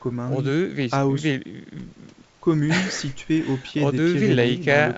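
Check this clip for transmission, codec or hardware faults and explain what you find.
No faults found in it.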